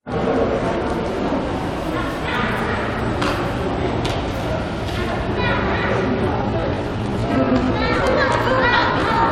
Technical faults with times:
6.32-9.31 time-stretched section

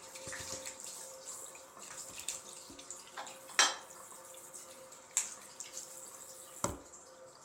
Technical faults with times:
none

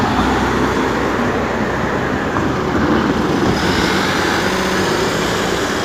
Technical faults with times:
4.56-4.75 repeated frames

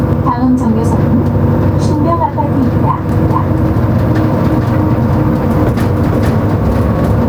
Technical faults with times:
0.00-7.28 gain pumping
3.09-6.57 doubled audio track

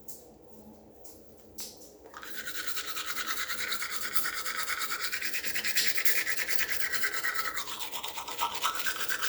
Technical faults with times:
none

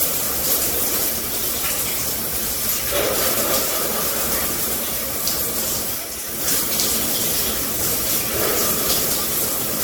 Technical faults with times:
0.00-9.84 generation loss

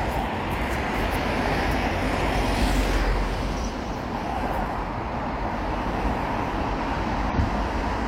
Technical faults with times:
4.18-4.23 damaged data in a compressed stream
7.29-7.34 damaged data in a compressed stream

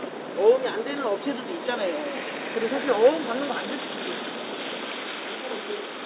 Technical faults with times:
none

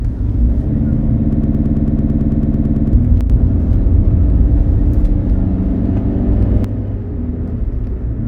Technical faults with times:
1.33-2.93 broken-record loop
3.21-3.30 one channel drops out
6.64-8.27 one channel drops out

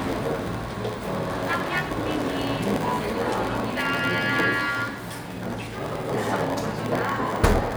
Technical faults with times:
0.00-7.77 block size mismatch (padded)
2.11-2.27 loud pop

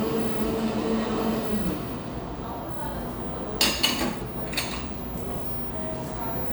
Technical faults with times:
none

